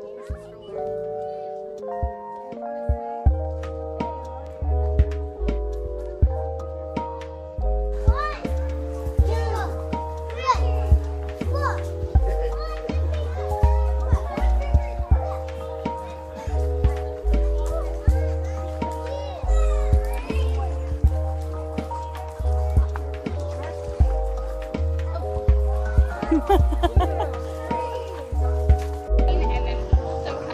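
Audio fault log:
Nothing stood out on listening through the whole recording.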